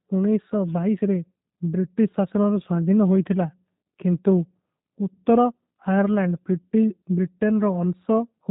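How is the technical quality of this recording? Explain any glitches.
The recording carries plainly audible low-bitrate codec damage from start to finish. Throughout, the speech has the character of the G.729 codec, which fits an 8 kbit/s stream. The codec rebuilds each short frame from a vocal tract filter, a pitch predictor and a few pulses. That leaves the voice slightly rough and synthetic, with nothing above 3.8 kHz.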